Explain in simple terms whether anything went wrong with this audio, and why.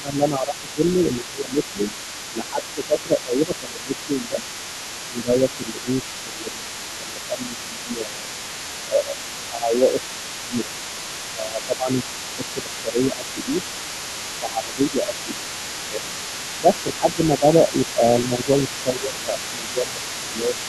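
Speech suppressed in double talk shows up five times: 0.0 to 4.41 s, 5.09 to 8.31 s, 8.86 to 10.72 s, 11.34 to 13.63 s, and 14.4 s to the end. In each stretch the main talker gets noticeably quieter. This is likely because both people spoke at once, and the echo canceller could not tell the talker apart from the other person's voice coming out of the speaker, so it turned everything down.

The other side's voice leaking through runs for the whole recording, from 0.0 s to the end. A second, fainter voice sits underneath the main one, clearly quieter. This likely happens because the talker's device plays the other person over a loudspeaker, and the microphone picks it up again. The echo canceller is supposed to remove that copy but only partly succeeds, so some of it stays in the recording.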